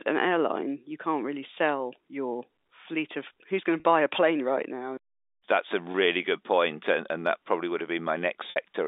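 At 3.80 s, between "of who's going to" and "buy a plane right", packet loss with pitch repetition bridges a 40 ms gap. The last pitch period repeats, giving a brief buzzy hold. A similar hold follows at 5.92 s (20 ms), before "good point and and", and at 8.50 s a 60 ms loss fades into silence.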